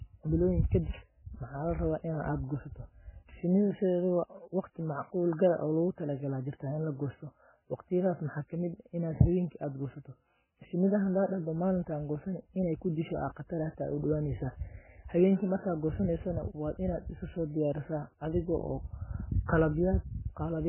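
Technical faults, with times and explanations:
Throughout, MP3 compression: the speech has no content above 3 kHz and a heavily watery, swirling texture, likely from MP3 encoding at a very low bitrate, around 8 kbps. Starved of bits, the encoder discards everything above a fixed treble cutoff and zeroes weaker frequency lines, which flicker on and off between frames. That flickering creates the swirl and chirpy metallic edges on s sounds, and consonant onsets smear instead of landing crisply.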